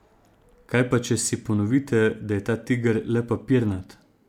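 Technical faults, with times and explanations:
Nothing technical jumps out here; the speech comes through without any dropouts, glitches or other problems worth noting.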